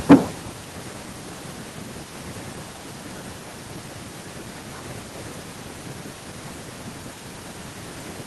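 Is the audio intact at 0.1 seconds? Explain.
No. From 0.10 to 0.15 s the speech turns harsh and crackly, with a flattened, gritty edge where the loudest part of the syllable should be. This is microphone overload. The input level was likely set far too high, driving peaks about 14 dB past the converter's ceiling, so their tops were sliced off. About half the samples in that stretch sit pinned at the limit, which produces the distorted crackle.

At 0.12 s, in the middle of that distortion, both the speech and the background drop in level abruptly, by about 2 dB, in a single step rather than a gradual fade. This is the microphone volume being stepped down. Call software likely reacted to the clipping it detected and cut the device's input gain at once. That is why the loudness falls suddenly right after the distorted peak begins.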